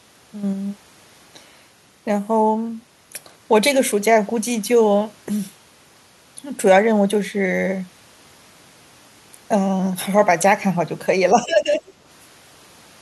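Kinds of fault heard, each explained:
Speech suppressed in double talk: Near the end, from 11.34 to 11.81 s, the speech dips sharply by roughly 15 dB. The likely cause is an echo canceller confusing overlapping talk with echo. It then turned the wanted speech down too.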